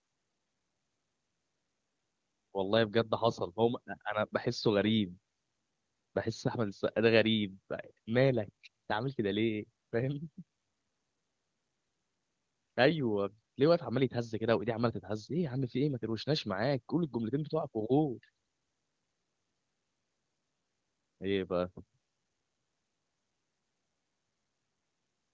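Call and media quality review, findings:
No faults found in this call audio.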